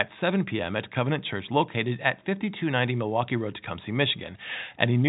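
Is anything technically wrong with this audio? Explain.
No, nothing technically wrong is audible here.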